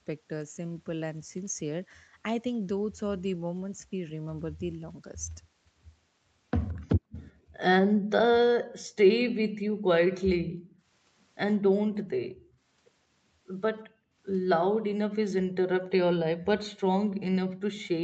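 Echo leak, 6.68 to 7.28 s: a very faint copy of speech trails about 170 ms behind, likely because the far end's loudspeaker output reached its microphone and the echo canceller failed to remove all of it before sending it back.

Speech suppressed in double talk, 6.71 to 6.84 s: overlapping with that echo, the talker's speech drops sharply, almost to nothing, for a brief moment. The canceller likely could not separate its own talker from the returning loudspeaker sound and turned both down.

Background gated by the echo canceller, 7.12 to 8.1 s: while the loudspeaker was active, the canceller clamped the microphone, so the room sound dips by about 40 dB and then returns. The same dropout recurs at 10.35 to 10.87 s, 11.59 to 12.72 s and 13.85 to 16.51 s.

Echo leak, 16.75 to 16.8 s: a second faint echo slips through at the same 170 ms delay, even quieter and shorter than the first.

Background gated by the echo canceller, 17.1 s to the end: the room sound again falls by about 40 dB.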